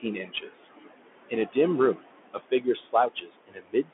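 From start to finish, noise suppressor artifacts hold the room noise, which sits about 13 dB below the speech, about 20 dB down between phrases. The leftover pumps with the speech, unlike steady hiss that stays level.

The Bluetooth CVSD headset codec runs throughout. The band is squeezed to roughly 250 Hz to 3.4 kHz, which fits a 64 kbps one-bit stream. S sounds turn scratchy and a granular grit rides under the speech, rather than a plain muffled filter.

Speech cut by the noise suppressor comes in five places: 0.28 to 0.67 s, 1.29 to 1.57 s, 1.96 to 2.06 s, 2.34 to 2.67 s, and 2.92 to 3.92 s. In each, soft sounds drop by about 17 to 21 dB and seem swallowed, rather than breaking off cleanly as a dropout would. The last one is the longest, taking in about half a second.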